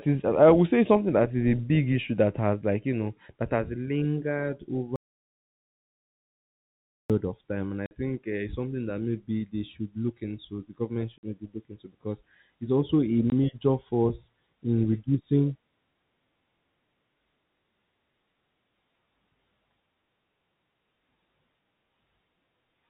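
A speech recording carried over a G.711 telephone path, where everything above 4 kHz is absent and the faint level-following quantisation noise stays in the background, suffers an audio dropout to silence from 4.96 to 7.10 s. The input was likely lost at the source, through a disconnected device, a broken link or an accidental mute, while the recorder kept writing silence. The speech breaks off abruptly and resumes mid-flow about 2.1 s later, with silence in between and no room tone, so whatever was said in that stretch is gone. Separately, packet loss filled with silence punches shorter holes into the stream at 7.86 to 7.91 s, 11.18 to 11.23 s and 13.30 to 13.32 s. The receiver had nothing to play for those spans and inserted silence, giving two 50 ms gaps and one 20 ms gap. All three are whole multiples of 10 ms, which points to 10 ms packets. Each gap has hard edges as the speech is chopped.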